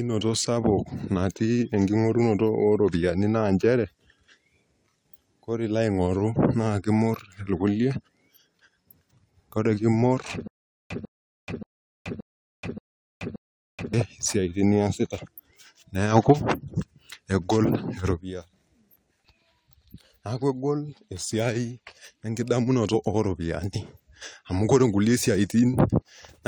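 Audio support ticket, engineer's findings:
Stutter with silent gaps, 10.48–13.94 s: a 148 ms burst of the speech repeats six times at an even 577 ms period, separated by about 428 ms of digital silence. Likely a player or stream stall, replaying the last buffered fragment each retry, then running dry.

Damaged data in a compressed stream, 22.90–22.95 s and 25.78–25.83 s: brief glitches, 50 ms each. Corrupt compressed frames there make the decoder misread or drop them and lose sync until it finds the next valid frame header.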